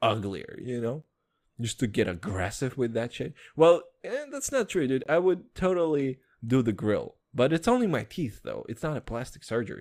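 A speech clip with a gap between stream segments at two points: a brief hole at 1.02 s and a longer one from 5.04 to 5.06 s, about 13 ms and 21 ms of added silence. Both have hard edges and sit 4 s apart, which fits segment boundaries where time stamps leave room the player pads with silence. Unlike a dropout, nothing is missing; the speech resumes exactly where it stopped.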